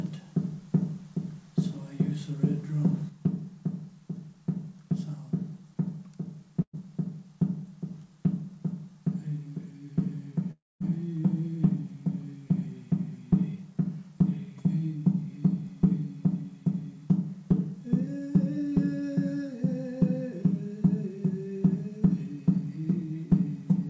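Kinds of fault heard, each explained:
Burst of packet loss: at 6.62 s the sound is continued and fades briefly, then skips ahead; about 120 ms of audio was lost.
Long network dropout: at 10.51 s the last sound fades into silence for about 0.2 s, then audio resumes further on, likely after a 300 ms network outage.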